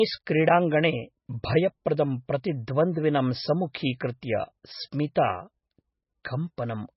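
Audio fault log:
throughout: MP3 compression. Heavy codec damage is audible as watery, swirling speech, with nothing above 5.6 kHz and weak spectral detail flickering between frames. That points to a very low bitrate near 17 kbps, where the encoder likely starved the frequency lines of bits.
6.57 s: pre-echo. A hiss of about 11 ms runs just ahead of a sharp onset, which sounds softened. The transform block spread quantisation noise meant for the loud attack across the quiet moment before it.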